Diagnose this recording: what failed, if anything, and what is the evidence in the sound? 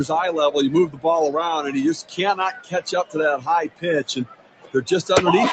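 The failure is in the call processing stage. A noise suppressor built for speech stayed active on non-speech sound. It reads steady tones, ambience and decaying tails as noise. Attacks pass, but sustained parts sink, so the level swings by roughly 15 dB throughout.

The sound cut by the noise suppressor is clearest at 0.88–1.05, 2.03–2.19, 2.52–3.16, 3.68–3.85 and 4.25–4.75 s. There the sound drops by about 15, 16, 16, 17 and 18 dB. Steady or fading material is gated down and its decay is clipped.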